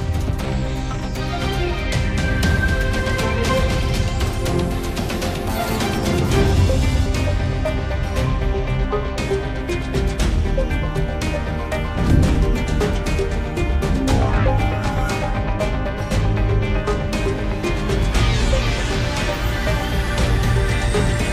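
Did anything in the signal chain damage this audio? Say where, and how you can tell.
Yes. At 5.48, 7.06 and 12.35 s the sound jumps forward, each time skipping around a fifth of a second. Nothing is silenced, so the likely cause is a dropped buffer (overrun) at the driver or buffer stage: the capture software fell behind and the hardware overwrote unread samples. A waveform shows an abrupt discontinuity with no gap, and a spectrogram shows a thin vertical broadband line where the two unrelated stretches meet.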